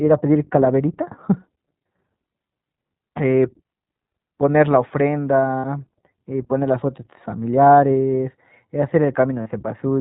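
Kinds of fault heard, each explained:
iLBC codec: A narrowband VoIP codec. Nothing above 4 kHz survives, and the speech sounds plainly rough and synthetic, which fits iLBC at 15.2 kbps.
lost iLBC frames: Lost packets were concealed with a repeated, noisy pitch cycle. Buzzy held vowels appear at 5.58 s for 60 ms and 9.42 s for 40 ms.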